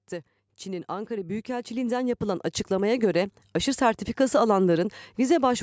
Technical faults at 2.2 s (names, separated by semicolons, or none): automatic gain rising